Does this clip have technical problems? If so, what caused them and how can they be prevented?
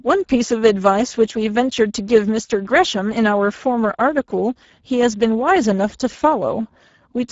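Yes. Speex codec damage runs throughout: the speech sounds hoarse and noisy, which fits a low setting near 10 kbps with too few bits for the excitation. A spectrogram shows nothing above 7.7 kHz and grainy, smeared harmonics. Encode at higher Speex quality, or use Opus.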